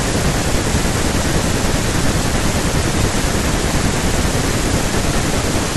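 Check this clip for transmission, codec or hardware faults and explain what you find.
A steady train of ticks runs through the speech from 0.07 s to 5.69 s, spaced every 0.064 s, roughly sixteen per second. These are periodic USB or driver dropouts: something repeatedly stalls the audio path, skipping a tiny fraction of a millisecond each time, around a hundred times.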